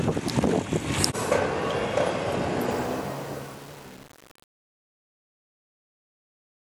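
Truncation distortion on a fade runs from 2.71 s to the end of the sound. The fade is computed with too few bits and no dither, which fits roughly 7-bit resolution, so as the level drops the waveform collapses into coarse square steps and the tail sounds gritty.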